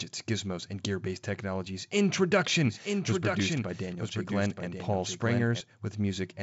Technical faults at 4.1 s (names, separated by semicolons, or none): doubled audio track